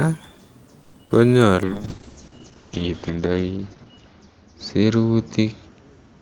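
From 0.83 to 0.96 s the sound stops advancing and the last moment is stretched into about 100 ms of fading buzz or hiss. Nothing is lost, and everything after arrives about 100 ms later. This is a call audio freeze, likely from delayed packets emptying the jitter buffer. On a spectrogram it appears as smeared horizontal bands tapering off.

At 1.05 to 1.13 s a burst of packet loss removes about 80 ms of audio. The receiver covers the hole with about 50 ms of decaying buzz or hiss, then jumps ahead, pulling timing back by about 30 ms. The waveform shows a short fading stretch ending in an abrupt resumption mid-shape.

From 1.67 s to the end a call bitrate drop takes the encoder from 40 kbps to 7 kbps, bottoming out for 1.48 s. Detail turns rough and watery, and the bandwidth shrinks from 20 kHz to 8 kHz. On a spectrogram, energy above 8 kHz disappears, leaving a flat ceiling.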